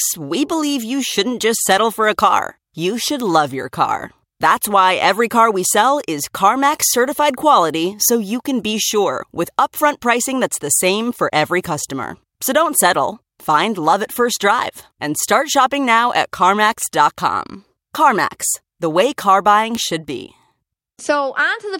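A bit flipped in a digital stage at 1.72, 3.2 and 19.75 s, each time forcing one or a few samples to leap by a power of two to about -3 dBFS before snapping back. Each bit error spike cuts through the speech as a single sharp, broadband tick.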